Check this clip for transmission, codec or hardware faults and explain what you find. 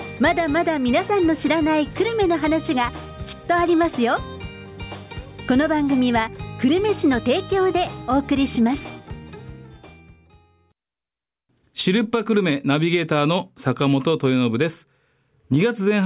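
Nothing to report: no faults of any kind are audible anywhere in the clip.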